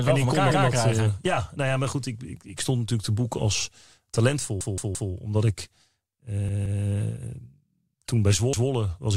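Four times, new audio failed to arrive in time, so the device replayed its last 171 ms buffer (which fits an 8192-sample buffer). Each repeated buffer is heard as a stutter with a hard join: at 0.51 s after "wel voor elkaar" (replayed once), 4.61 s (three times), 6.49 s (twice) and 8.53 s after "toen bij" (once).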